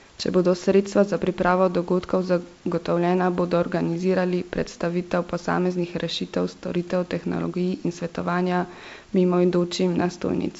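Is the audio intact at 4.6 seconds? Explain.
Yes, the audio is intact at 4.6 seconds: the speech passes cleanly through the G.722 call path, which leaves nothing above 8 kHz, with only the room's background noise sitting about 36 dB beneath it.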